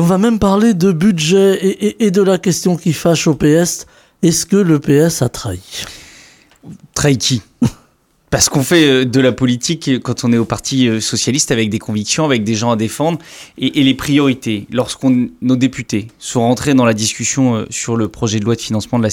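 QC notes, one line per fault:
Nothing here to flag, so there's no fault line to write for this clip.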